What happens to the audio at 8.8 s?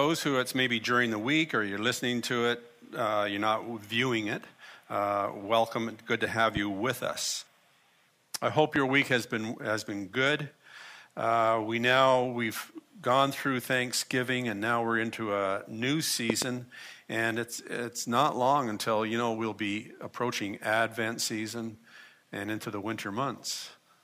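A single loud pop lands at 8.76 to 8.78 s, peaking roughly 15 dB above the surrounding sound, which continues underneath. It is likely a brief voltage pulse from a switch, plug, static discharge or driver glitch, shaped by the downstream circuitry into a sharp thump.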